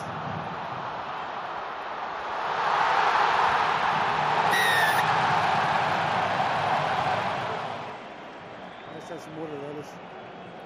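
Listening through the recording, nothing stood out as a technical fault at any point.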